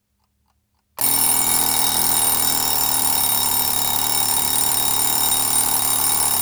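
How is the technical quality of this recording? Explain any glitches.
Nothing in the recording stood out as a technical problem on listening, so there are no glitches to explain.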